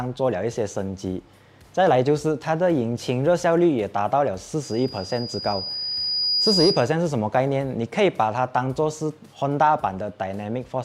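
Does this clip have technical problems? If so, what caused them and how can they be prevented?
Yes. A loudspeaker feedback squeal runs from 4.63 to 6.96 s: a single tone at 4.9 kHz swells over roughly two seconds until it sits around 5 dB above the rest of the sound. The microphone was picking up the loudspeaker it was feeding, and at that frequency the loop gain exceeded one, so the tone kept reinforcing itself. To prevent it, move or aim the microphone away from the loudspeaker, lower the gain, or notch out the 4.9 kHz band.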